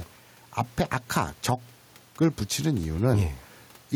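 A speech recording in which the gain keeps swinging, by around 10 dB, and the louder and quieter syllables sit squashed close together in level. That is gain pumping, heard across the whole clip. The likely cause is input gain set far too high for the microphone, with a fast limiter or compressor clamping down on every loud moment and letting go in the gaps; the room noise sits about 35 dB below the speech.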